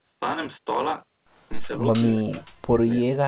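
A speech recording carrying a block size mismatch (truncated) from start to finish: a steady buzz at about 46.9 Hz sits under everything, and the speech runs about 1.12 times fast while keeping its normal timbre. That pairing fits one stage writing blocks longer than the next stage reads, at 1024 samples, with each block's tail discarded. A sample-rate error would shift pitch along with speed, and random dropouts would not repeat at a fixed rate. From 1.68 to 2.89 s the talker dips sharply, at its deepest by about 30 dB, with the affected stretches adding up to roughly a second. This is likely speech suppressed in double talk: the echo canceller turned the talker down along with the far side's echo. Packet loss would leave short gaps, not level dips that track overlapping talk. The G.711 mu-law call path leaves nothing above 4 kHz.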